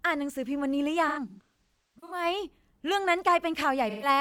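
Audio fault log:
1.08–2.25 s, AAC frame loss with concealment: about 640 ms of audio lost in bursts across roughly a second, with the longest run near 150 ms. The decoder repeats the last good spectrum, so the gaps come out as smeared, phasey patches instead of clean silent dropouts.
3.89–4.08 s, AAC frame loss with concealment: 128 ms lost, which points to about three AAC frames. It is patched with a noisy rebuild of the preceding spectrum and is too brief to fade into silence.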